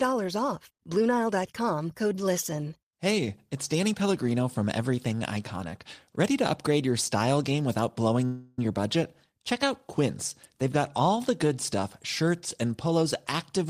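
At 8.25 s the speech stops moving forward for about a third of a second, until 8.59 s. A call audio freeze fills that gap. The last sound is stretched into a buzzy, hissing tail that fades, and there is no true silence. When the speech resumes, it picks up where it stopped, so nothing is lost. The 325 ms pause is simply added. Packets were likely held up in transit, leaving the jitter buffer empty.

From 12.86 s to 13.04 s comes a jitter buffer speed-up. The speech suddenly sounds rushed, running at about 143 percent of normal speed. The pitch does not rise. The receiver had more audio stored than it wanted, so it trimmed short slices one or a few pitch periods long, many times in quick succession. About 70 ms is cut in total, and the phrase is squeezed.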